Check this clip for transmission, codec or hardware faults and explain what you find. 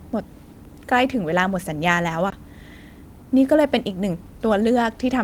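One hardware fault: a CD skip from 2.30 to 2.32 s. A jolt or surface flaw threw the laser onto another turn of the disc's spiral, so the speech mutes for about 20 ms and resumes from a different point. Unlike a plain dropout, the speech doesn't continue where it stopped.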